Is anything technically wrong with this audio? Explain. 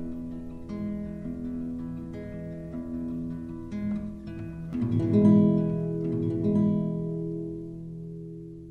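Yes. From 4.73 s to the end, the audio has a doubled audio track: a second, full-band copy of the same sound is mixed in about one and a half seconds behind the original, somewhat quieter. This likely comes from the signal being captured twice, once through a slower path, or an edit leaving two misaligned copies. The late copy enters abruptly, carries no decay or room colour, and makes everything play twice, overlapping itself.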